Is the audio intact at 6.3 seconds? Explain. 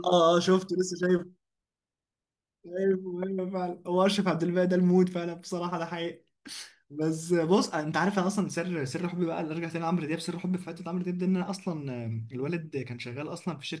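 Yes, the audio is intact at 6.3 seconds, with no audible fault at that moment.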